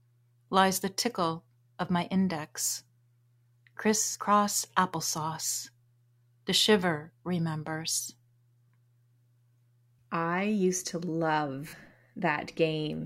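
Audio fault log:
4.11–4.15 s, lost LE Audio frames: about 40 ms goes missing, which fits four 10 ms frames. The LC3 decoder fills the hole by replaying the last good spectrum with randomised signs, so the speech smears into a short noisy patch.
11.68–11.80 s, lost LE Audio frames: 80 ms lost in bits across 120 ms, the longest run roughly 50 ms. Same concealment: the repeated, sign-scrambled spectrum smears the sound, and fades as the longer gap runs past the first few frames.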